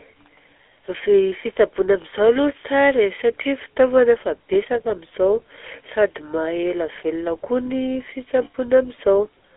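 From the start of the clip to the end, the speech carries the damage of the GSM full-rate codec, and it is plainly audible. The codec rebuilds the voice from a vocal-tract model driven by a sparse, regularly spaced pulse excitation, which gives the speech a buzzy, gravelly roughness. The sound fits a rate of about 13 kbps. The line band runs from 300 Hz to 3.5 kHz, and nothing is heard above 3.8 kHz, so the speech sounds narrow and dull.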